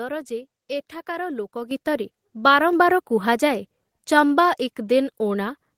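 A speech clip with one fault. At about 1.71 s the microphone volume is stepped up by about 8 dB in a single jump. Voice and background noise rise together. The call software judged the input too quiet and raised the device's gain at once.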